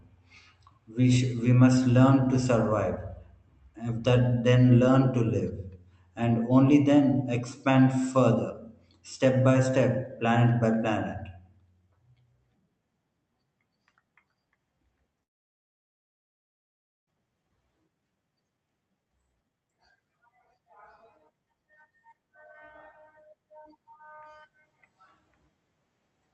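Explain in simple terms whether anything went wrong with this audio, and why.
A long network dropout runs from 15.23 to 17.11 s. The sound cuts out into almost two seconds of silence, likely because the connection stalled and audio stopped arriving. About a second of the speech never gets played, so it resumes with that part missing.

A jitter buffer speed-up follows from 17.19 to 21.92 s. Audio that piled up during the stall is played about 17% faster to catch up, with the pitch unchanged. Tiny slivers adding up to roughly 0.7 s are trimmed out, so the speech sounds hurried.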